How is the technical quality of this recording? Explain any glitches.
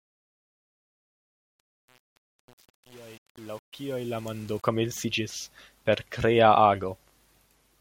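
The opening fade-in has one clear flaw. From 0.0 to 4.69 s there is truncation distortion on a fade. The gain stage drops low-order bits without dither, which fits an 8-bit path, so quiet passages collapse into square steps. It sounds gritty. The waveform shows a staircase, and the spectrogram shows broadband speckle.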